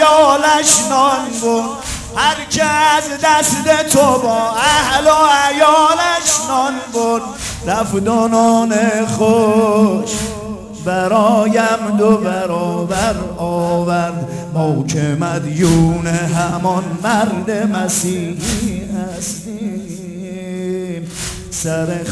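Aliasing runs through the whole audio. Content above 11 kHz folds back down into wrong, unrelated frequencies, so the highs sound gritty and metallic. The fold point fits a resample from 48 kHz to 22 kHz without an anti-alias filter. The folded tones sit roughly 20 dB below the signal.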